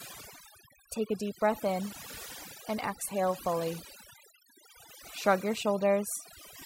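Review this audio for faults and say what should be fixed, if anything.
The whole speech clip suffers from overdone noise removal: the reducer is clamping individual frequency bands whenever they sit near its noise estimate, so the gaps drop to near silence with little twinkling specks, and the softer parts of the voice get eaten. Next time, back off the reduction amount and let a little of the noise floor remain.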